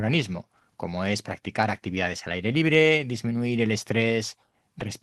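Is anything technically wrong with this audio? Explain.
No, nothing is technically wrong with this audio.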